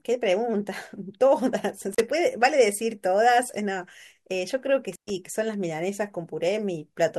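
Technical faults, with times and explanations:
1.93–2.00 s and 4.92–5.10 s: intermittent contact. A loose plug or cable briefly breaks the signal path, so the speech cuts out for about 37 ms, then about 117 ms. Crackle marks each edge as the contact opens and recloses, with faint hiss in each gap.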